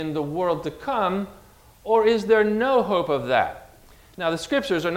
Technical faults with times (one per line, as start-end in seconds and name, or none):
none